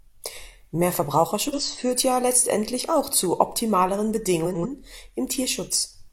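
From 1.47 to 1.61 s, just before "führt ja letztendlich auch", the speech flutters as frames play out of order. Two neighbouring 46.4 ms blocks swapped places. From 4.45 to 4.66 s, after "letztendlich auch zu optimaleren", two 92.9 ms blocks swap the same way. No time is lost.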